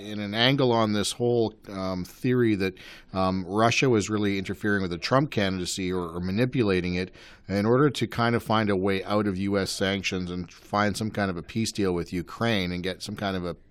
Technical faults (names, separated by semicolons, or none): none